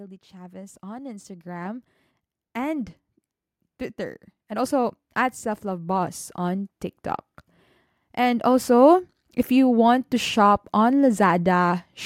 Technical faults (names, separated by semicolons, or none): automatic gain rising